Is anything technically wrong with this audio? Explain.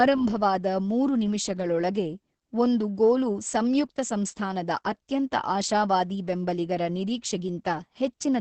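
Yes. Throughout the speech the sound is muffled, hoarse and slightly robotic, with nothing audible above about 8.6 kHz. This is Opus voice compression running in its SILK linear-prediction mode at wideband. SILK models speech as a filter driven by an excitation signal. At a bitrate that sounds like about 10 kbps, that excitation is coded very coarsely, heavily degrading the voice's texture. The missing top octave comes from the codec limiting the band to wideband.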